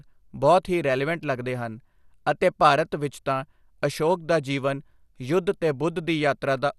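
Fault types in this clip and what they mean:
MP2 compression: The speech sounds dull and carries a gurgling, granular distortion throughout. Nothing is heard above about 12.2 kHz, where upper sub-bands have been switched off. The damage is plainly audible and likely comes from MPEG Layer II coding at around 80 kbps.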